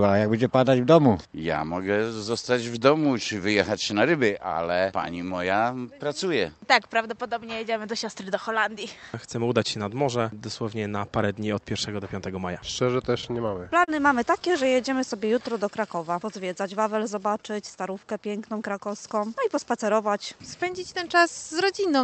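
Between 13.21 and 13.90 s the audio stutters: repeated stalls, six in all, where late packets left the jitter buffer empty and the receiver stretched the last sound to bridge each wait. About 83 ms was filled this way, the longest gap 37 ms, and nothing is lost. A second, lighter run follows from 14.40 to 14.82 s, with four gaps totalling 39 ms and none over 15 ms. On a waveform these show as short stretches of copied, repeating cycles, the longer ones tapering in level. A spectrogram shows brief frozen, smeared patches.

From 15.20 to 15.60 s a jitter buffer slow-down stretches the sound to about 88% speed without lowering its pitch. The receiver repeated single pitch periods to add 55 ms and rebuild its reserve, so the passage drags and sounds drawn out. The waveform holds near-identical periods in a row. On a spectrogram the harmonics stay at the same height but run longer and flatter than the material around them.

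Between 17.55 and 18.23 s a jitter buffer speed-up does the opposite. Too much audio had piled up, so the receiver trimmed short pitch-period pieces, roughly 50 ms in total. The sound runs at about 107% speed at unchanged pitch and feels hurried. On a waveform the cycles look compressed in time with small discontinuities at the cuts. A spectrogram shows events packed slightly closer together. Throughout, the call codec's band limit appears as an empty region above 8 kHz.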